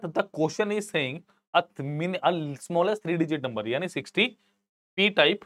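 A drift correction step runs from 2.15 to 3.12 s. The sound speeds up by 5.5% and rises 92 cents, just under a semitone, then abruptly snaps back. The likely cause is clock-matching software briefly changing the playback rate to rebalance its buffer.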